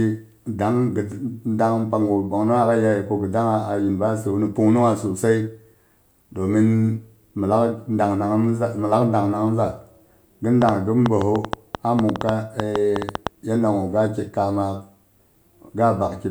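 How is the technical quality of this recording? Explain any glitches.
There's one real problem here: a train of clicks from 10.62 to 13.28 s. For about two and a half seconds, something punches short, near-identical pulses into the recording at roughly seven per second, but the spacing is uneven, so it doesn't settle into a steady beat. You get around twenty of them, peaking roughly 15 dB above the speech, so they sit right on top of it as sharp popping. The likely culprit is electrical interference from nearby gear or a faulty connection or power supply.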